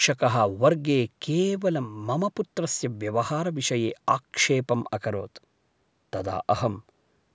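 No technical faults can be heard anywhere in the speech. It has been through a call's microphone processing, which trims the lowest bass and leaves nothing above 8 kHz, as that path normally does.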